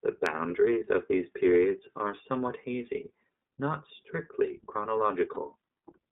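The whole clip is speech heard through the iLBC codec. The band runs only from about 200 Hz to 3.7 kHz, so it sounds thin. Each 30 ms frame is coded on its own. The damage is plainly audible as a rough, synthetic edge, which fits the 13.33 kbps mode.

At 5.34 to 5.38 s, lost iLBC frames leave a 30 ms gap. The decoder fills it by repeating the last pitch cycle with added noise. It sounds like a brief held, buzzy vowel. Normal sound returns almost at once.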